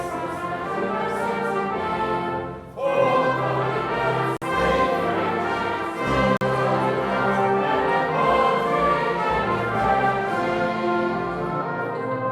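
The sound drops to silence twice, from 4.37 to 4.42 s and from 6.37 to 6.41 s (51 and 43 ms). Playback then resumes, which points to a likely Bluetooth stall.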